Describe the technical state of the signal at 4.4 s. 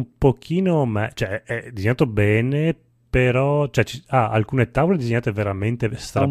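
At 4.4 s the speech signal is intact, with no audible fault at that moment.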